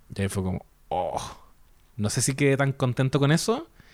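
No audible technical faults are present in this speech recording.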